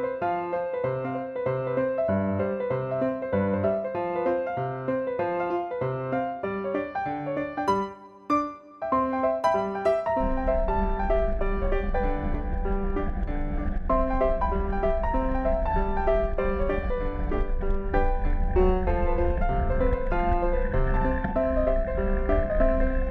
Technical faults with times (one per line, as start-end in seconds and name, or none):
none